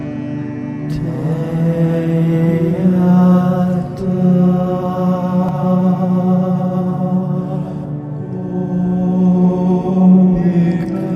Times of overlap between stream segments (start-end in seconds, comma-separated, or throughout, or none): 5.49-5.51